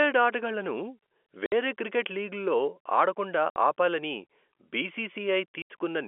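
Packet loss filled with silence cuts the speech three times: at 1.46 to 1.52 s, just before "క్రికెట్ లీగ్లలో ఆడకుండా ఆపాలని"; at 3.50 to 3.56 s, right after "క్రికెట్ లీగ్లలో ఆడకుండా"; and at 5.62 to 5.70 s. The 60, 60 and 80 ms holes fit whole 20 ms packets being replaced by silence. They have hard edges against the narrowband telephone-coded audio.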